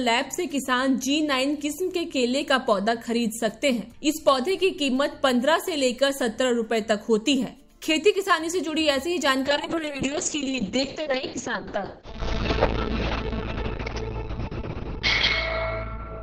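A brief crackle sits on a peak at 4.28 s. This is hard clipping: the signal overran what the stage could pass by about 2 dB, so the peak was cut flat, and the squared-off top sprays harmonics high up the spectrum.

From 9.47 s to the end, the sound turns rough, watery and muffled, with everything above 6 kHz gone and the worst stretch lasting about 4.6 s. This is a call bitrate drop: the call's bandwidth estimate fell, so the encoder coded far more coarsely, which fits a fall from around 128 kbps to roughly 6 kbps.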